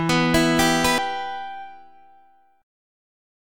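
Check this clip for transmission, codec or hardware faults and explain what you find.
One fault is audible: a CD skip at 0.98 s. The laser jumped to another turn of the disc's spiral. The player muted for a few milliseconds and resumed elsewhere. You hear a brief tick, then the sound abruptly continues from a different point.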